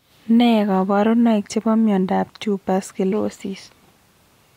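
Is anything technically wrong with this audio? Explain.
Yes. At 3.12 s there is damaged data in the compressed stream, heard as a brief blip in the speech. Corrupted bytes at that point made the decoder misread the frame, lose sync and resume decoding at the next valid frame header.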